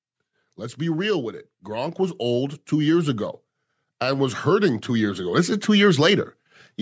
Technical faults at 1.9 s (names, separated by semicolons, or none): automatic gain rising